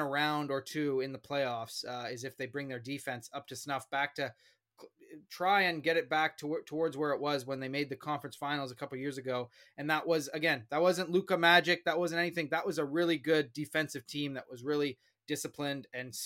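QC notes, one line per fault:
0.13–16.25 s, clock slip clicks: a fast, regular ticking, roughly every 40 ms, that blends into a soft rattle under the speech. Likely two unsynced clocks drifting about 500 ppm apart, so a single sample gets dropped or repeated each time they slip.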